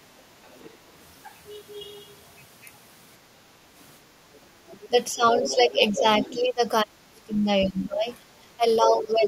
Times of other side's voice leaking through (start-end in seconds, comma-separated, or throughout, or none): 0.44-0.76, 4.34-4.88, 5.37-6.36, 7.78-7.85